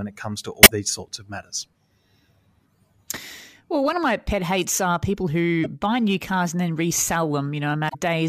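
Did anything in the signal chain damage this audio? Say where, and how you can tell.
Yes. Damaged data in a compressed stream shows up three times, at 0.62 to 0.71 s, 5.64 to 5.66 s and 7.85 to 7.95 s, each a short glitch breaking into the speech. This points to the codec or storage stage. Corrupted bytes in the encoded stream leave the decoder unable to read those frames, so it emits garbage or drops them and hunts for the next valid frame header.

Hard clipping starts as brief crackles at 0.88 to 0.90 s and 3.10 s, where peaks are pushed about 4 dB past the ceiling. It then recurs over longer stretches across 3.76 to 4.96 s, 5.38 to 6.43 s and 6.81 to 8.22 s at about 2 dB overdrive. This happens at a gain or converter stage whose range the speech exceeds. The waveform tops are sliced flat, and that adds high harmonics on the peaks.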